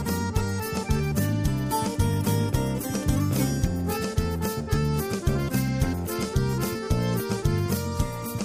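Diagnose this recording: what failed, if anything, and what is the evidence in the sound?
Nothing stood out on listening; no stage of the chain left anything audible in the recording that points to a failure.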